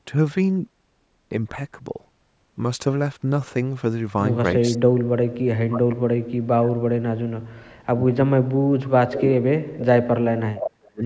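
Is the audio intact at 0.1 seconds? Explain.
Yes, the speech at 0.1 seconds is intact, with only the call's usual microphone processing shaping it.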